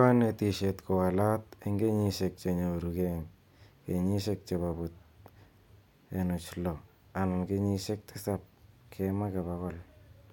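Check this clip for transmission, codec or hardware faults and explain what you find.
No transmission, codec or hardware faults turn up in this speech clip.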